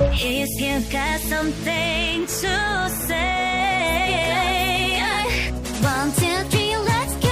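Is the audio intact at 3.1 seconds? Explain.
Yes, at 3.1 seconds the audio runs intact, with no dropout, click, distortion or other fault to be heard at that point.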